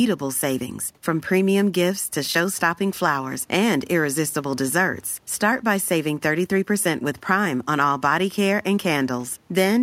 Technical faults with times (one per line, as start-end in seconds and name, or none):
none